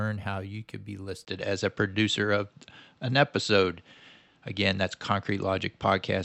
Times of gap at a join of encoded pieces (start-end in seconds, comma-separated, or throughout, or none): none